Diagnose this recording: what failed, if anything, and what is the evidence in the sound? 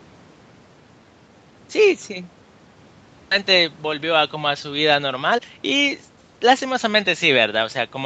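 The fault is a skip ahead in the network and jitter-buffer stage of the call. Between 3.31 and 3.33 s the speech jumps forward with no gap and no fill. About a second of audio is missing, and the two sides of the cut are spliced almost directly. A stretch of packets was lost in transit or discarded when the buffer overflowed while later audio was already queued, so playback resumed from the newer audio.

The jitter buffer speed-up comes from the same buffer. From 3.41 to 6.72 s the speech runs about 14% fast at unchanged pitch and sounds hurried. The buffer held more audio than its target. It then trimmed short pitch-period segments repeatedly, about half a second in total, to bring latency back down. The Opus path's 8 kHz band limit is audible throughout.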